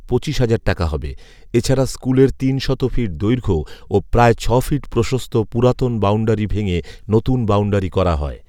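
No technical faults occur at any point in the speech, so there is nothing to place in time order.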